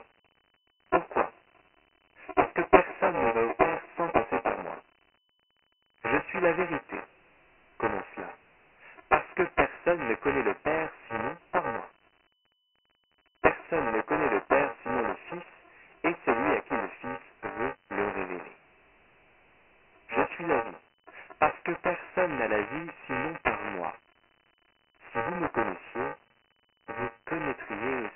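Buffer tearing runs through the whole speech clip: a robotic buzz at 345 Hz, which fits a 128-sample buffer, where roughly a sixth of each period replays audio about 10 ms old. The waveform shows regular hard seams.

Dialogic VOX ADPCM coding also runs throughout. It is heavily damaged, with gritty hiss trailing the speech, and the spectrogram is empty above 3 kHz, which points to 24 kbps at 6,000 samples a second.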